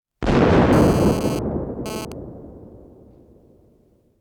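From 0.73 to 2.12 s a GSM phone buzz cuts in at about 13 dB below the sound: a hard, rasping tone at 217 Hz, rich in harmonics. A nearby 2G handset was sending short radio bursts at that rate, and the audio circuitry rectified them into audible pulses. The buzz starts and stops abruptly, as it does during a data transfer. Mains hum, by contrast, sits smoothly at 50 or 60 Hz and stays put.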